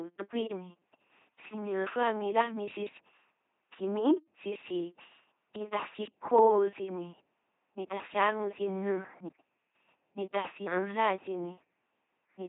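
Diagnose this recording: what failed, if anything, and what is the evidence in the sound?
LPC-10 vocoder artefacts run throughout the speech, a codec-stage failure. The voice is a buzzing, mechanical robot tone with nothing above 3.8 kHz, consistent with about 2.4 kbit/s. Each moment is rebuilt from a ten-pole filter driven by either pulses or noise, never both.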